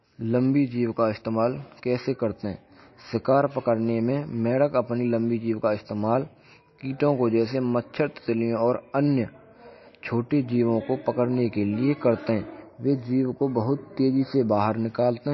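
Throughout the speech, the sound is watery and swirly, with sibilants breaking into metallic chirps, consonant attacks smeared, and nothing at all above 5.8 kHz, leaving the top end sealed off. The likely cause is heavy MP3 compression at a low bitrate, somewhere near 26 kbps. Starved of bits, the encoder cuts the treble at a fixed point and drops weaker frequency lines that flicker on and off between frames, producing that unstable, burbling texture.

From 12.62 s to 14.57 s the sound turns hollow and phasey, with a dulled, scooped quality in the upper midrange. This is channel delay causing comb filtering. One channel runs late by a tiny fraction of a millisecond, and when the two are summed to mono, shared content cancels at evenly spaced frequencies. The first deep notch falls around 3 kHz, which carves out presence and clarity.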